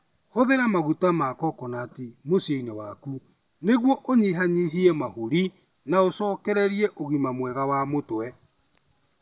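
No technical faults can be heard anywhere in the recording.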